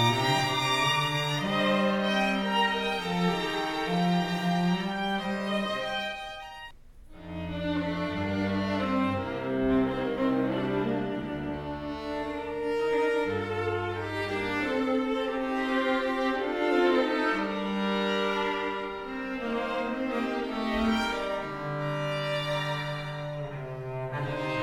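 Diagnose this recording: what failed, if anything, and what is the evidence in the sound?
Nothing failed; no stage of the chain shows a fault.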